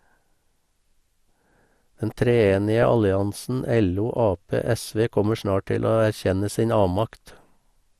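Throughout, the speech sounds dull and grainy, with a gurgling edge: MP2 compression, likely at a low rate such as 80 kbps. Too few bits switch upper sub-bands off, so a spectrogram shows the top end cut away and flickering blocks above it.

At 2.82 s a brief burst of DAB burbling appears. Bit errors at a small rate, around a tenth of a percent, slipped through error correction and corrupted the audio data, putting short blips of noise into single sub-bands. On a spectrogram this shows as isolated bright horizontal patches.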